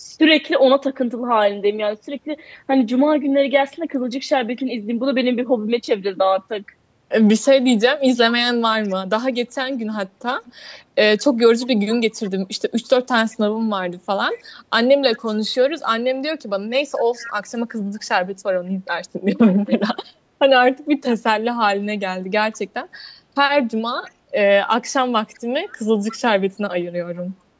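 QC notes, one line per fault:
8.84–15.5 s, 17.2–17.31 s and 19.48–27.22 s, echo leak: a faint copy of the speech trails it by about 196 ms, quiet in the first stretch, stronger in the brief burst at 17.2 s. This is likely a loudspeaker echo that one side's echo canceller left in.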